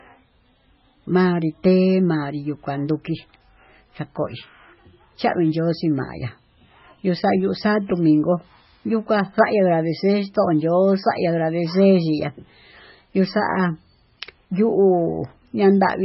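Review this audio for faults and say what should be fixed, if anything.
Throughout, the speech stops sharply at 5.6 kHz and sounds watery, likely from heavy MP3 compression near 16 kbps. A spectrogram shows a flat ceiling with flickering gaps. Encode at a much higher bitrate, or keep a lossless copy.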